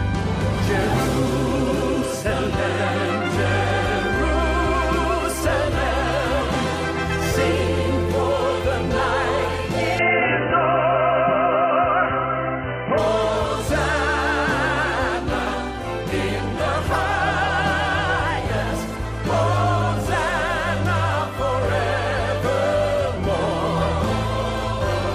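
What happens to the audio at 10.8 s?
From 9.99 s to 12.98 s the sound turns dull and boxy, with nothing above 3 kHz, and a new background noise appears about 35 dB below the signal; the overall level stays roughly the same, and there is no gap at either edge. The likely cause is the input switched to a poorer device, such as another microphone or a headset's call profile, whose narrower band and own noise floor replace the original input for those three seconds.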